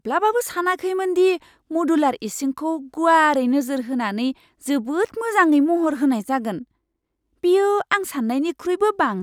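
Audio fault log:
Nothing to log here; this speech clip comes across without any fault worth noting.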